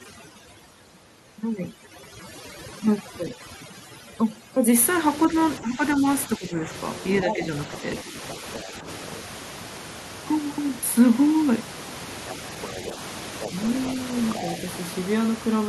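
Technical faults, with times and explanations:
0.00 to 4.76 s, overdone noise removal: The room noise, which sits about 13 dB under the speech, is pushed down and breaks up into twinkling specks where individual frequency bands flicker on and off. Quieter parts of the speech were judged to be noise and removed with it. The effect spans the whole stretch and follows the noise floor. Double-talk dips, by contrast, appear only as brief, separate drops in the speech.
3.31 to 3.41 s, 5.28 to 6.68 s, 7.24 to 7.43 s and 8.04 to 8.87 s, speech suppressed in double talk: The speech dips or breaks into pieces for short spells. The longest run is near 5.3 to 6.7 s, where the deepest drop reaches about 10 dB. The other runs fall only about 5 dB. The likely cause is an echo canceller that could not tell the talker from loudspeaker echo while both sides spoke, so it pulled down everything. Unlike noise removal, these are discrete level drops and do not leave a lasting watery texture.
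7.14 to 7.78 s, 8.32 to 9.11 s, 12.29 to 13.49 s and 14.33 to 14.54 s, other side's voice leaking through: A second voice can be heard under the main speech. It is loudest in the first stretch, at roughly 5 dB below the talker, and fainter later, around 10 to 15 dB down. It is likely far-end audio from the loudspeaker that the echo canceller did not fully remove. This is an added sound rather than a loss, which separates it from the double-talk dips that overlap it near 7.2 and 8.3 s.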